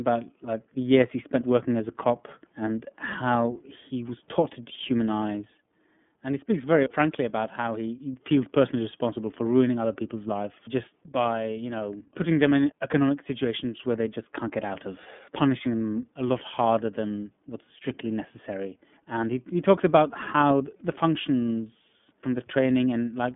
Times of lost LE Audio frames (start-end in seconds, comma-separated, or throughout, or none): none